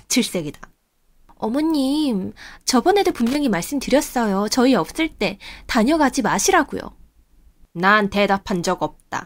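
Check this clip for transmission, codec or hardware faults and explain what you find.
There is one hardware fault in this speech clip: loose connector crackle from 3.10 to 3.35 s. A worn or dirty contact somewhere in the cable or jack briefly lost steady connection, opening and closing many times within about a quarter of a second. Each break chops the signal, and any DC on the line turns those breaks into pops. The result is a short, irregular burst of scratchy crackle laid over the speech.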